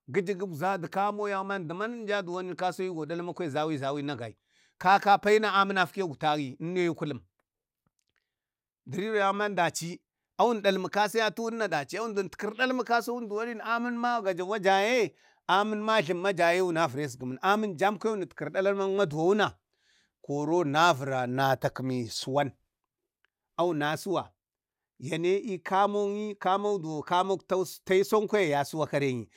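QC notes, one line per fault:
19.12 s, DAB burbling: a brief burble on the speech. Bit errors at around a tenth of a percent escaped error correction and corrupted MP2 audio data, which fits roughly three damaged frames.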